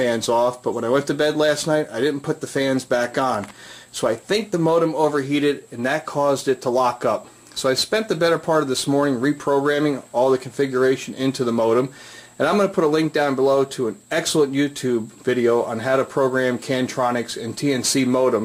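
No technical faults can be heard anywhere in this audio. There is nothing to place on the timeline and nothing that needs explaining.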